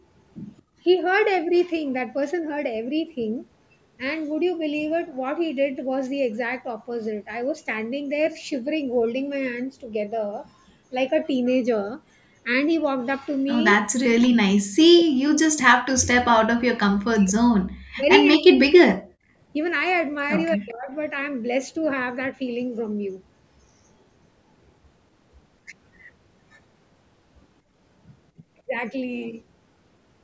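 A speech recording with three kinds of call-processing fault. Right at the start, from 0.62 to 0.79 s, the room sound behind the talker suddenly sinks by about 26 dB for roughly 150 ms and then comes back. That is background gated by the echo canceller: while the loudspeaker was playing, the canceller clamped the microphone down hard, taking the ambience with it, and released it once the far end fell quiet. The most serious fault starts at 13.76 s. The talker's voice drops away very deeply, by something like 40 dB, in a string of cuts at 13.76 to 13.82 s, 14.03 to 15.26 s, 15.63 to 17.56 s, 17.94 to 19.09 s and 20.55 to 20.91 s. The longest gap runs about two seconds, so whole stretches go nearly silent. This is likely speech suppressed in double talk: with both sides talking at once, the echo canceller could not tell the local voice from loudspeaker echo and turned everything down. Inside that stretch, at 18.32 to 18.37 s, a brief scrap of sound appears about 225 ms behind the speech it copies, sitting some 15 dB below it. 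This is probably echo leak, where part of the loudspeaker signal got past the canceller and was sent back as a delayed fragment. The band stops at 8 kHz, in line with the normal microphone processing of a call.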